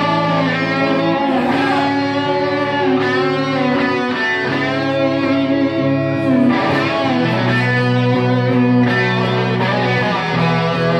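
Nothing here calls for comment: no glitches, dropouts or other technical faults turn up anywhere in this recording.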